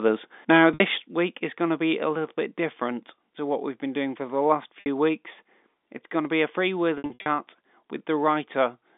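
Right at the start, 0.52 to 0.63 s, there's microphone overload: the peaks are driven about 5 dB past the converter's limit, likely from the input gain being set too hot, so the tops get shaved off and you hear a harsh crackle. Then from 0.74 to 0.80 s, just before "week is going to", there's packet loss with pitch repetition. About 60 ms drops out, which fits three lost 20 ms packets, and the receiver fills it by looping the last pitch cycle, so you get a short buzzy hold. The microphone volume stepped down at 1.02 s, again before "week is going to", with level and background falling about 5 dB at once. The likely cause is the call software reacting to that overload. It steps down again by about 2 dB at 2.04 s, between "is going to be" and "little bit different to". More packet loss with pitch repetition follows at 4.80 to 4.86 s, another 60 ms buzzy hold. From 6.98 to 7.26 s, about 200 ms goes missing in scattered gaps, none longer than 60 ms, so it stutters through several brief held, buzzy patches. 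All of this comes through a G.711 telephone line band of roughly 200 Hz to 3.6 kHz.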